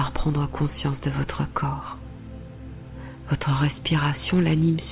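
Nothing is technically wrong with this audio; the call path is working as expected, and the absence of anything above 4 kHz fits a narrowband call codec such as G.711.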